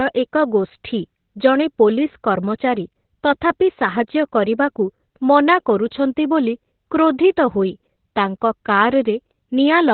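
Across the whole clip, heavy Opus voice compression has squeezed the speech through the SILK coder in narrowband mode, which fits a bitrate near 8 kbps. Nothing survives above 4.3 kHz, so a spectrogram shows a flat ceiling there, and the coarse excitation leaves the voice muffled, hoarse and faintly robotic.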